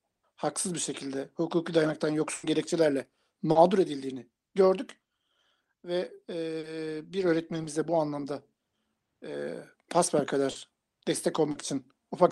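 At 2.35 s a burst of packet loss cuts out about 80 ms of speech. The receiver stretches the last sound into a fading buzz or hiss, then resumes further on. Short concealed packet loss follows at 3.51, 6.59, 10.51 and 11.51 s. Each time about 40 ms goes missing and is patched over. The patch is a brief smear or wobble, and a consonant may vanish.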